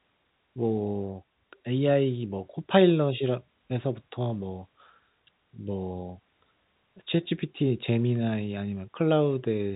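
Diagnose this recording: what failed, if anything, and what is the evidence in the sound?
Nothing failed in this recording, and the sound carries no evidence of any fault.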